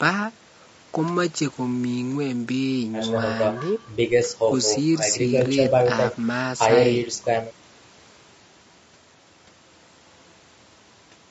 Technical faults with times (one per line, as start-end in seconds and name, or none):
0.00-11.31 low-delay AAC compression